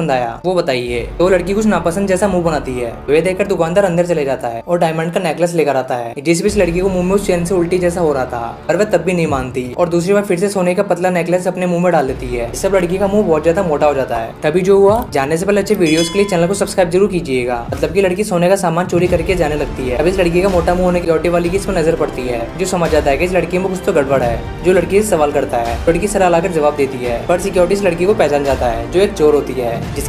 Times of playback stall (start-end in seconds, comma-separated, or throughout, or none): none